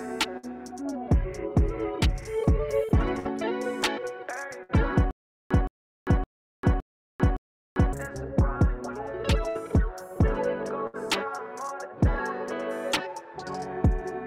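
Bursts of packet loss at 0.37, 3.19 and 4.63 s each drop about 60 ms of audio. The receiver stretches the last sound into the gap, fading it down, so a brief held buzz or hiss replaces the missing stretch before the sound jumps ahead.

From 5.11 to 7.93 s comes a stutter with silent gaps, likely a stalled stream retrying. A 168 ms fragment repeats five times, every 564 ms, with about 396 ms of dead silence between, and the audio due in that span is lost.

Two further bursts of packet loss follow at 9.49 and 10.87 s, each again losing about 60 ms, covered by a short fading continuation of the preceding sound.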